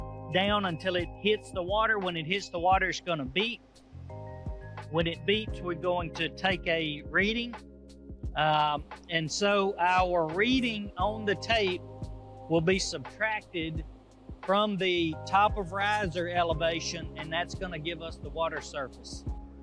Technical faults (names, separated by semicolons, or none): none